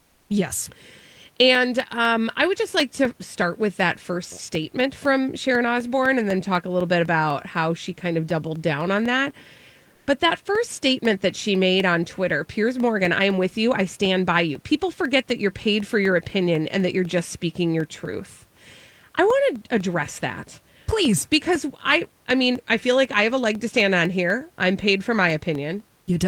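From 0.30 s to the end, periodic USB or driver dropouts occur: something stalls the audio path every 0.25 s and a brief slice of signal is replaced by silence. The result is a steady tick or pop four times a second, audible whenever speech is present.

At 9.93 s, the sender likely stops transmitting during a pause, as discontinuous transmission in a codec such as Opus does. For about 140 ms the room background, which sits about 41 dB below the speech, is replaced by comfort noise in place of the background. This is a flat, detail-free hiss only about 1 dB different in level, before the real background returns at 10.07 s.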